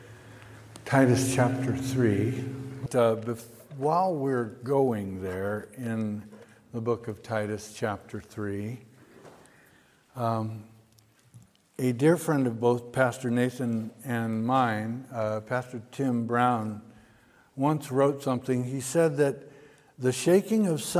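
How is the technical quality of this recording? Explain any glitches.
No glitches can be heard, and the recording holds steady throughout without any technical fault worth flagging.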